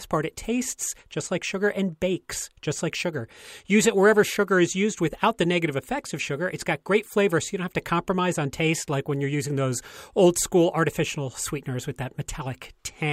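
No technical fault can be heard anywhere in the recording; the speech signal stays continuous and intact throughout.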